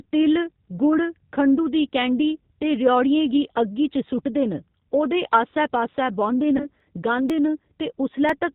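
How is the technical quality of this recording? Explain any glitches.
Technical quality is limited: the speech runs through a low-bitrate voice codec the whole way, and two glitches near the end add a brief concealment artefact and a series of small clicks.

G.729 codec, throughout: The audio was encoded with G.729 at 8 kbit/s, which rebuilds speech from a compact model of the vocal tract and pitch and discards everything above 4 kHz. The result is plainly audible: a muffled, band-limited sound with a rough, slightly synthetic texture.

VoIP packet loss concealed by the speech codec, 6.57 to 6.67 s: About 30 ms of audio failed to arrive, which fits a single lost packet. The decoder filled the gap by extending its last pitch and filter settings while turning the gain down. That is heard as a short, fading smear of buzz or coloured noise, and the voice stays weakened for a moment after real audio resumes.

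Periodic USB or driver dropouts, 6.80 to 8.29 s: Something blocked the audio driver or USB transfer about every 0.5 s. Each time, a couple of milliseconds of audio were skipped. The result is a few evenly spaced ticks that are audible only where speech is present.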